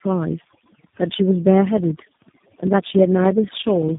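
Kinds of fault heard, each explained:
Overdone noise removal: The background drops and breaks up into twinkling specks. A noise reducer set too strong is cutting individual frequency bands whenever they sit close to its noise estimate, taking the softer parts of the speech with them.
Tandem speech coding: The speech is rough, muffled and warbly, with nothing above 3.7 kHz. It has likely passed through three low-rate speech coders in series, the last sounding like G.729A. Each one re-encodes the previous coder's already damaged output, so the artefacts stack.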